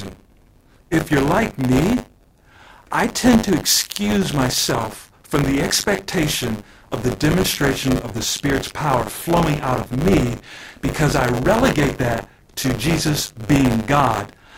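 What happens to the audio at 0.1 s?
At 0.1 s the audio is already affected by buffer tearing, which runs through the whole speech clip. The writing program and the playback hardware have drifted out of step, so they cross inside every buffer period. A slice of each period, roughly 15%, carries audio from about 40 ms earlier, joined hard at both edges. The result is a steady robotic buzz at 100 Hz, which points to a 10 ms buffer period, heard whenever speech is present.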